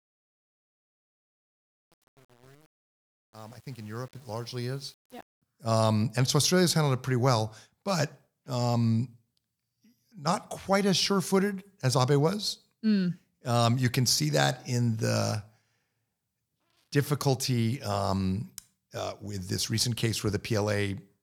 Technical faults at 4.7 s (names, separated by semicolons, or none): truncation distortion on a fade